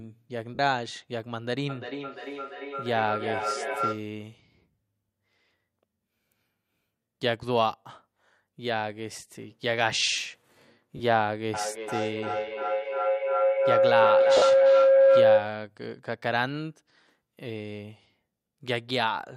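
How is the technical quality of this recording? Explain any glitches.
The speech recording has two recurring problems: brief dropouts that smear the sound, and two stretches of feedback howl. The second howl is louder than the speech.

Lost LE Audio frames, at 0.55–0.59 s (40 ms), 10.97–11.00 s (30 ms) and 14.37–14.42 s (50 ms): each gap sounds like a short noisy smear rather than clean sound. The Bluetooth link dropped packets, which fits a few 10 ms frames each time, and the LC3 decoder filled the holes by repeating the last spectrum with scrambled phase.

Feedback howl, at 1.69–4.14 s and 11.54–15.64 s: a sustained whistle builds, with the loop repeating about every 300 ms. The first is near 1.5 kHz and peaks about 3 dB below the speech. The second sits near 500 Hz and reaches about 8 dB above it. Two devices on the same call in one room formed a loop that amplified the sound on each pass.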